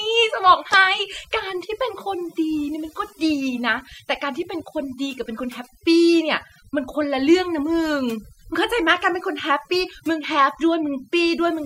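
Overdone noise removal runs throughout: the suppressor cuts bands near its noise estimate too hard, leaving near-silent, twinkling gaps and taking quiet parts of the voice with them.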